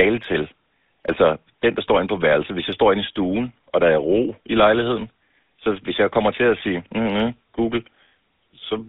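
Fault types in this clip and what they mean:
GSM full-rate codec: The audio has plainly audible buzzy, gravelly roughness. Its band runs only from 200 Hz to 3.7 kHz, which fits 13 kbps GSM.
Pre-emphasis left on: After "kommer til at sige", from 7.11 s, the treble sits about 8 dB too high at 10 kHz. The sound turns thin, bright and sibilant.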